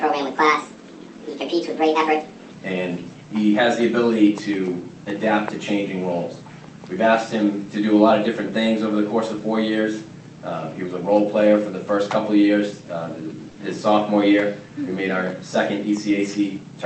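Section at the wrong speed, from 0.0 to 2.52 s: the audio plays 1.49 times too fast, pitched up by about seven semitones, likely from being resampled against the wrong clock.

Short stall from a late packet, at 13.49 to 13.57 s: a packet arrived late, so the receiver stretched the last sound for 60 ms and then resumed without losing anything, leaving a brief held moment.

Jitter buffer speed-up, from 15.88 to 16.73 s: the receiver trimmed around 70 ms of excess buffered audio in small pitch-period cuts, running it at 107% speed with unchanged pitch and a slightly hurried feel.

Throughout, the Opus call path limits the band to 8 kHz.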